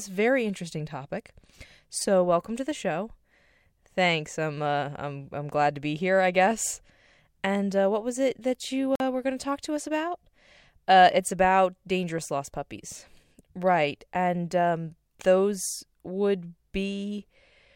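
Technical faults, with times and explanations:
8.95 to 9.00 s, Bluetooth dropout: packets likely missed their delivery deadline and were discarded, leaving a 46 ms silent hole between "was it that you" and "were going to talk", with speech resuming further along.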